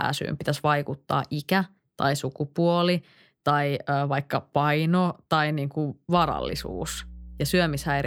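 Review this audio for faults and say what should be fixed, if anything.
A ground loop or nearby transformer is coupling the power line into the signal path from 6.17 s to the end of the recording, producing mains hum. It sits as a steady low tone at 60 Hz under the speech, roughly 15 dB below it. To prevent it, run all gear from one grounded outlet, use balanced cables or a ground-lift isolator, and keep signal lines away from transformers.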